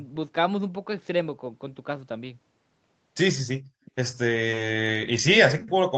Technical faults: echo leak

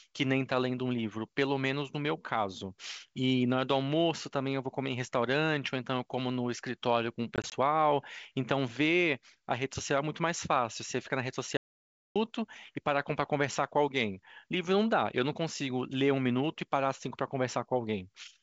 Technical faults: packet loss on an ADPCM call; audio dropout to silence

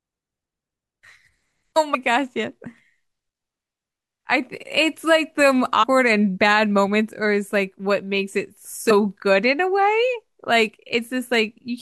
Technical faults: compressed frames skipped

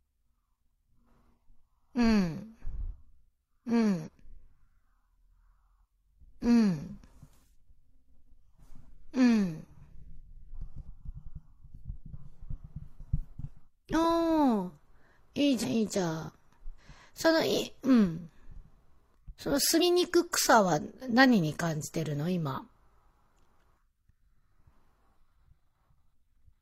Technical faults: compressed frames skipped

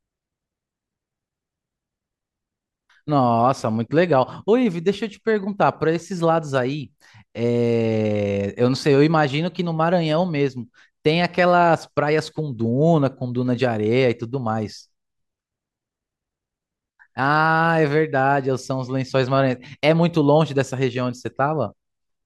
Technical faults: none

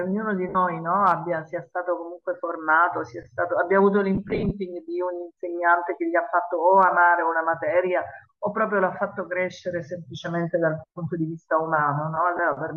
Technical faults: Bluetooth LC3 compression; lost LE Audio frames

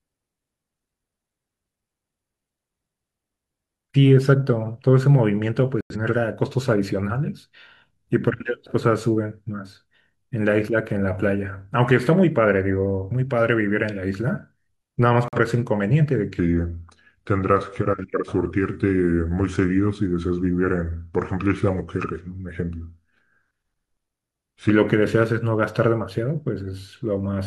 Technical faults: corrupt frame muted; section at the wrong speed

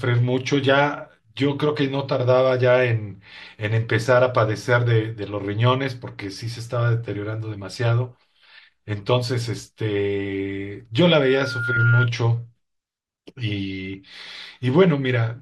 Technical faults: loudspeaker feedback squeal

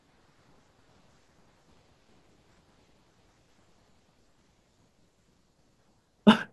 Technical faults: none

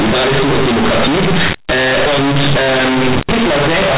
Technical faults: companded audio read as linear

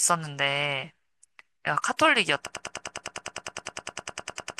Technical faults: broken-record loop

